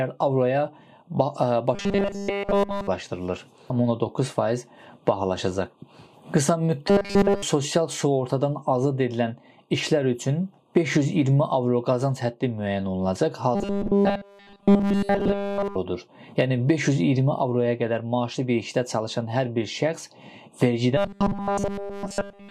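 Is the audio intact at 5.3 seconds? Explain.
Yes, at 5.3 seconds the audio plays through cleanly, with no dropout, click, distortion or other fault at that moment.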